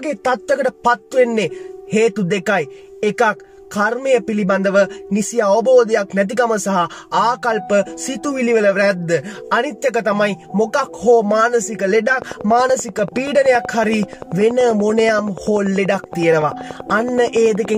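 A train of clicks runs from 12.22 s to 17.76 s: around fifty near-identical pops at a steady 10.5 per second, peaking a few dB above the audio. They appear as evenly spaced spikes in the waveform and thin vertical stripes on a spectrogram, likely from interference by nearby equipment.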